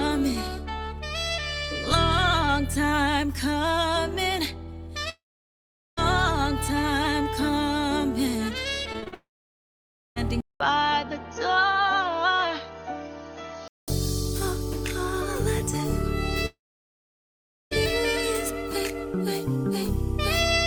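At 5.09 s the sound breaks off until 5.99 s, likely a long network dropout. About 0.88 s of audio never arrives. The receiver briefly extends the last sound as a fading buzz, then leaves roughly 0.79 s of silence before the signal resumes with the lost section simply gone.

From 8.93 s to 9.14 s there is repeated packet loss with a robotic sound. Four short holes, the longest 41 ms, are each patched by stretching the preceding audio. The concealment covers about 44% of that span, so the sound turns choppy. It runs straight into what is likely a second long network dropout from 9.14 s to 10.18 s. This one loses about 1.02 s, with roughly 0.92 s of it silent after the brief fill.

At 10.41 s a 200 ms silence marks a likely switch of the input to a poorer device, lasting to 13.88 s. Nothing above 6.5 kHz survives, so the sound turns dull and boxy. A new noise floor sits well below the signal, roughly 50 dB down, and the overall level stays about the same.

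The third likely long network dropout runs from 16.46 s to 17.73 s. About 1.26 s is lost: a short fading fill, then around 1.16 s of silence before the audio returns further along.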